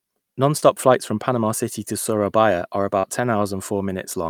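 At 0.57 to 0.64 s and again at 3.00 to 3.05 s, short concealed packet loss leaves a brief smear where about 40 ms of speech never arrived and was extrapolated. On a spectrogram, the last sound stretches flatly across each gap before the real detail resumes.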